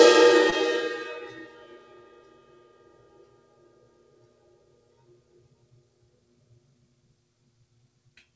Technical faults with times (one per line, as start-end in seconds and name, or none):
0.00-8.36 noise suppressor applied to music or sounds
0.50-0.54 short concealed packet loss